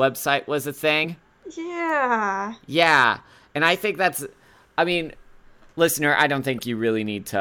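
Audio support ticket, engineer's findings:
Compressed frames skipped, 1.03–1.06 s, between "was a" and "yeah yeah and i". Speech jumps ahead by around 30 ms. Probable component: file or demuxer losing whole frames, or the decoder rejecting them as damaged.

Corrupt frame decoded, 4.07–4.09 s, right after "yeah and i think". Brief burst, roughly two frames long, peaking near -20 dBFS. Flipped bits reached the decoder and were played, putting energy at wrong frequencies. Probable component: bitstream transport or storage.

Corrupt frame decoded, 6.58–6.63 s, after "listener i". Same artefact, longer, roughly three frames, again near -20 dBFS. Same mechanism and component.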